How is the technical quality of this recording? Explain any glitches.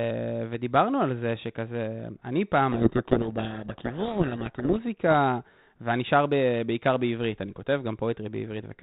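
The recording is telephone-band speech with one clear glitch. The audio stops at 4 kHz and carries only light coding noise, which fits G.726 ADPCM at about 32 kbit/s.

From 2.72 to 4.80 s there is a codec payload misread. For about 2.1 s the decoder reads the G.726 code words with their bits in reversed order, so each difference value is wrong and the adaptive prediction wanders. The speech is buried in harsh, rasping distortion. On a spectrogram that stretch fills with broadband noise up to the 4 kHz ceiling and the speech harmonics smear. The waveform looks jagged and dense until both ends match again at 4.80 s.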